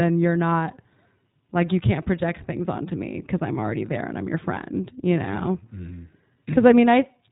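A speech recording passed through the iLBC codec throughout, which fits its 20 ms frame, 15.2 kbps mode: nothing above 4 kHz, and plainly audible rough, synthetic coding damage.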